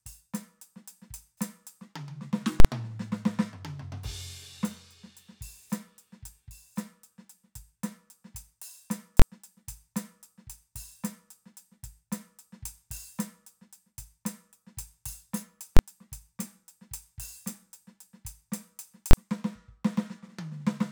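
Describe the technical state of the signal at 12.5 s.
At 12.5 s the music plays through intact, with no dropout, click, distortion or other fault to be heard at that point.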